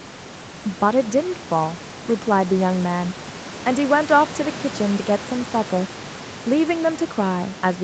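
No faults in the speech: the audio stops at 8 kHz, as expected for a wideband call path, and the room noise sits about 17 dB below the talker.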